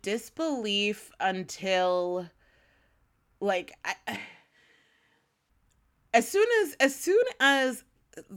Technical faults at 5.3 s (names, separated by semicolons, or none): switch to a distant microphone